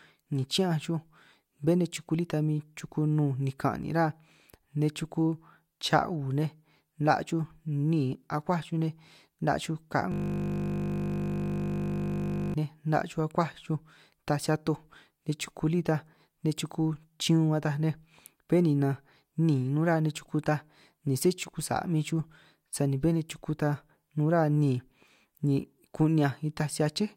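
From 10.12 to 12.54 s, a system hang loop: the computer froze, hardware cycling one 20 ms buffer, a steady 50 Hz buzz, not stutter.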